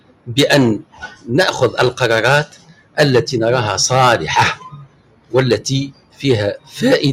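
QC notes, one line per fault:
Throughout: noise suppressor applied to music or sounds. A suppressor tuned for speech stays engaged across the whole clip and keeps reclassifying sustained and ambient parts of the sound as noise, so gain swings by roughly 20 dB as it opens and clamps. Sharp onsets pass largely intact while anything held or decaying is pulled down. The result is audible pumping and a thinned, fluttering texture instead of a steady level.
0.00–0.31 s, 0.79–1.29 s, 2.45–2.98 s, 4.55–5.33 s, 5.87–6.24 s, 6.58–6.75 s: sound cut by the noise suppressor. In each span the suppressor mistakes the sound for noise and attenuates it well below its surroundings, by about 17 dB at the deepest point and about 16 dB in the last, shortest span. Steady or fading portions sink or have their tails truncated, heard as dips lasting from a fraction of a second up to roughly 0.7 s.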